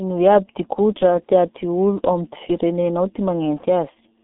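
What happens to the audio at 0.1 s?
G.723.1 codec damage is present at 0.1 s and runs through the whole clip. The coder models the speech in coarse 30 ms frames at a rate that points to about 6 kbit/s and passes nothing above 3.8 kHz, so the speech sounds muffled and hoarse, with smeared consonants.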